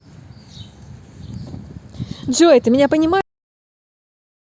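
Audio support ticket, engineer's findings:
Cut-off end at 3.21 s: speech stops mid-sound, straight to digital silence until clip end, no decay tail. Final buffers never written or played out. Waveform: abrupt drop to flat silence. Spectrogram: energy ends on a hard vertical edge.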